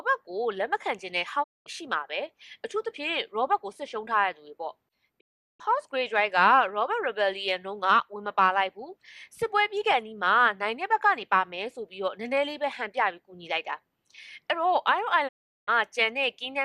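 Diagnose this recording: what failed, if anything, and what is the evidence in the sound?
Digital broadcast dropout at 1.42–1.68, 5.19–5.61 and 15.27–15.69 s: the receiver lost or rejected frames, fading to silence within 20 ms until good frames returned.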